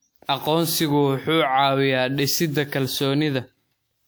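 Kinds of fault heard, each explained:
Generation loss: The speech sounds swirly, smeared and hollow throughout, more than a single pass at a WMA rate near 128 kbit/s would explain, and attacks are blurred. The likely cause is about seven re-encodes, each adding noise; nothing remains above 20.1 kHz.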